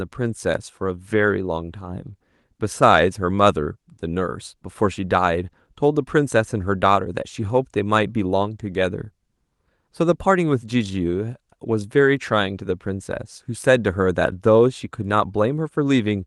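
No technical faults can be heard in this recording.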